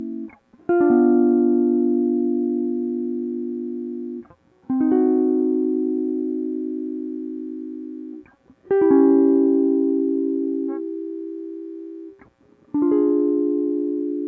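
Nothing technically wrong shows up in this music clip; it has simply passed through a call's microphone processing, which trims the deepest bass and leaves nothing above 8 kHz, and that's normal for that path.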